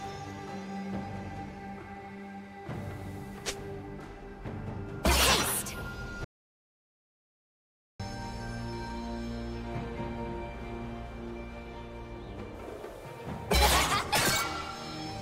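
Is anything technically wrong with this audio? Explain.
Yes. From 6.24 to 8.00 s there is an audio dropout to silence. The sound stops abruptly and returns about 1.75 s later with no room tone. The cause is likely lost input while recording continued. On the waveform this appears as a flat line, and on the spectrogram as a fully blank band.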